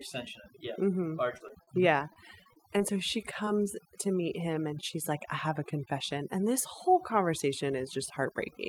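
Speech runs through overdone noise removal for its whole length. The suppressor is set so hard that any frequency band close to its noise estimate is pulled far down or switched off. The background sinks to near silence dotted with twinkling specks, and the quieter parts of the voice are stripped away with it. Ordinary background hiss would sit steady under the voice. Here the residue flickers, which points to the processing rather than the room. Short concealed packet loss appears three times: at 1.37 to 1.42 s, at 1.48 to 1.51 s, and at 3.45 to 3.49 s, just before "to meet him and". Each time about 20 ms of audio never arrived, which fits 20 ms packets. The receiver bridged the hole by extending the last sound and then blending back in, so each spot is a brief smear or wobble with a sliver of sound genuinely gone. A short stall from a late packet follows at 1.63 to 1.69 s. Here the jitter buffer ran dry and the last sound was held for about 42 ms until the packet turned up, and playback resumed where it left off. 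What separates it from the losses is that nothing is missing: a sound is simply drawn out, with a faint buzz or dip, and everything after it lands about 42 ms later. Repeated packet loss (robotic sound) covers 2.13 to 2.82 s. Within it a handful of holes, the longest 21 ms, follow one another closely, and about 11% of the stretch is patched-in sound. Unlike the isolated dropouts, the concealment never gets a chance to settle, so the passage turns choppy, with small pieces lost throughout.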